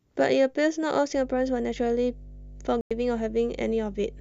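Mains hum enters at 1.15 s and runs to the end. It is a steady low tone at 50 Hz, sitting roughly 20 dB below the speech. A ground loop or nearby transformer is leaking the power line into the signal path.

At 2.81 s a digital broadcast dropout mutes the speech until 2.91 s. The receiver lost valid data and went silent for about 96 ms, which fits four lost frames. That stretch of speech is simply gone, leaving a short hole.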